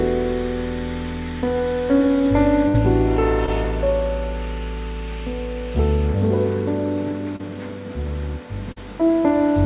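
A burst of packet loss hits at 2.68 to 2.76 s. About 60 ms of audio never arrived in time, and the receiver covered the hole by stretching out the last sound it had, letting it fade as the gap went on. That fill runs about 59 ms, heard as a brief held buzz or dimming hiss. The audio then picks up further along, with the stretch in between simply gone.

Short concealed packet loss follows at 3.46 s, 7.36 to 7.43 s and 8.72 to 8.78 s. Each time a few hundredths of a second failed to reach the decoder, about 20, 40 and 40 ms respectively. The receiver papered over them with continued pitch or shaped noise, about 13, 31 and 41 ms long, before blending back, so each registers as a quick smear or wobble. At 7.36 s the patch adds a little extra time. All of this rides on a narrowband call path with nothing above 4 kHz, which fits a 64 kbps telephone codec such as G.711.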